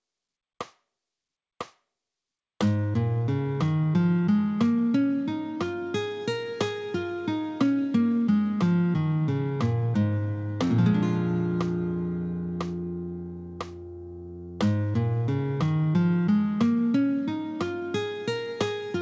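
There are no technical faults to describe at any point; the call path it came through works as expected, with the sound reaching no higher than 8 kHz, which fits a G.722 link.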